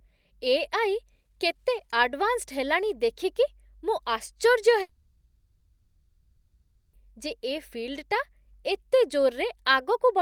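A speech clip with a long network dropout from 4.81 to 7.02 s, likely a stalled stream. About 2.1 s of audio never arrives. The receiver fills the gap by extending the last sound into a fading buzz or hiss, then near-silence, and the speech resumes with that portion lost.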